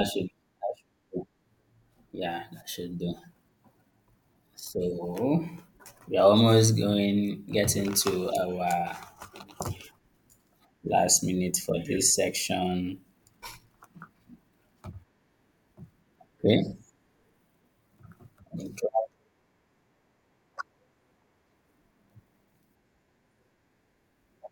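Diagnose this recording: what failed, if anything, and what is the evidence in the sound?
Two brief garbled moments break up the speech, at 4.27 s and 8.88 s, each a tiny jumbled stutter with no audio missing. This is chunks out of order at the driver or buffer stage: a block of about 5.8 ms was written late, landing two blocks behind its place at 4.27 s and one block behind at 8.88 s. Each swap leaves three hard joins between mismatched waveform edges.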